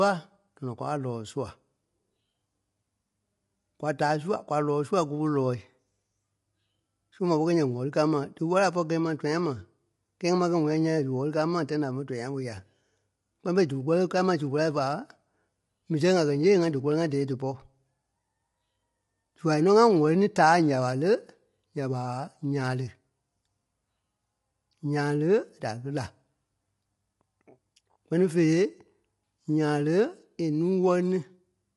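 Low-delay AAC compression runs throughout the speech, from start to end. The voice has a plainly audible rough, grainy texture, and nothing is present above 11.5 kHz, so the top of the spectrum is cut away. This is likely a low-delay codec such as AAC-ELD, whose very short frames resolve the pitch harmonics of the voice poorly and spend bits inefficiently. The degree of damage fits a modest bitrate of around 32 kbps.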